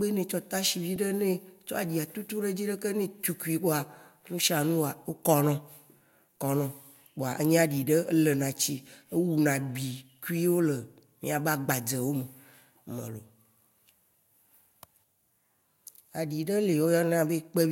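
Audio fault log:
0.96 s, repeated frames: a single compressed block of about 2.9 ms is played twice more, adding 5.8 ms to the speech. The repeats are heard as a stutter, the same fraction of a second played again.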